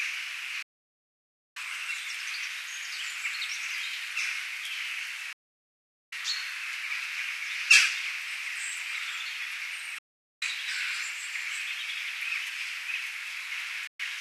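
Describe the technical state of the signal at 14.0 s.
A digital broadcast dropout runs from 13.87 s to 14.0 s, so at 14.0 s the signal is just coming back out of a muted gap. The receiver stopped getting usable frames, either losing the stream or rejecting frames that failed their checksum, and muted until valid data resumed. The sound fades out over about 3 ms into roughly 120 ms of silence, which fits around five lost frames. Whatever was broadcast during that hole is gone.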